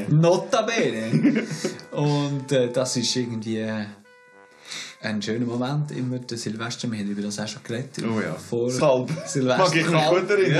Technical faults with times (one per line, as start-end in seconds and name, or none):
8.79 damaged data in a compressed stream